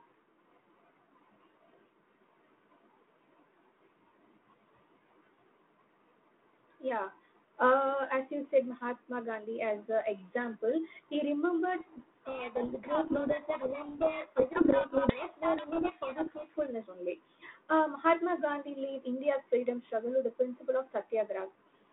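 Telephone-band speech, limited to roughly 150 Hz to 3.5 kHz with the light coding hiss of G.726 ADPCM at a rate consistent with 32 kbit/s, is hit by a codec payload misread from 11.78 s to 16.7 s. The far end unpacks each G.726 code word with its bits in reversed order, so the decoder chases wrong prediction differences and the speech sinks under harsh, rasping distortion until 16.7 s, when both ends use the same bit order again.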